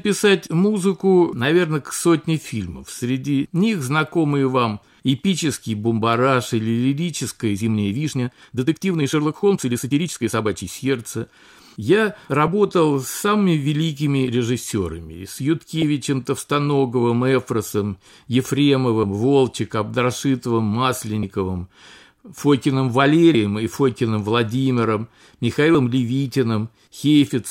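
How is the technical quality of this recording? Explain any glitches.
The recording has one clear glitch, a time-stretched section. From 7.50 to 10.68 s the speech suddenly runs about 1.5 times faster while its pitch stays put. The likely cause is software shortening the passage by dropping short slices and splicing the remainder, which sounds rushed. A spectrogram shows unchanged harmonic spacing but compressed syllables; the waveform shows tighter envelopes with small splice discontinuities.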